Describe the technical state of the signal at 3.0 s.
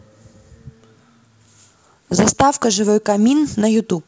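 At 3.0 s the audio is intact, with the speech carried cleanly through the G.722 wideband telephone coding at 64 kbit/s.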